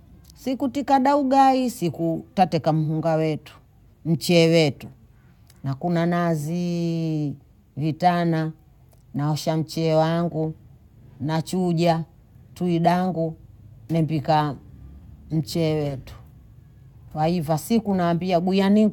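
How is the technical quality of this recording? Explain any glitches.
No technical glitches can be heard anywhere in this speech recording. There is nothing here that calls for an explanation.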